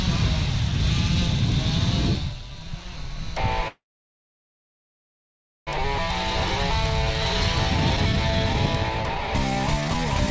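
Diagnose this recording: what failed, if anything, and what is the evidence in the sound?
Call audio freeze, 3.68 to 5.69 s: the sound stalls for about 2 s, mostly silence, then resumes intact. This likely comes from network-delayed packets emptying the jitter buffer.

Jitter buffer speed-up, 7.34 to 10.28 s: the audio runs at 128% speed with unchanged pitch, because the buffer trimmed roughly 0.7 s of pitch periods. The G.722 path leaves nothing above 8 kHz throughout.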